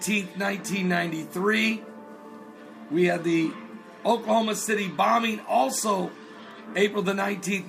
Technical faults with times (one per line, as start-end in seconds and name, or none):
none